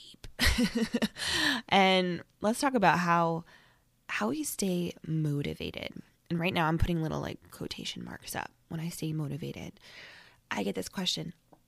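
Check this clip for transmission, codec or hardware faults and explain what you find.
One codec fault is present in this speech clip. From 8.91 to 8.96 s, a corrupt frame was decoded. Flipped bits in a few compressed frames were played anyway. Misread gains and codes pushed energy to wrong frequencies. The result is a brief, fairly quiet chirp or blip, peaking near -30 dBFS.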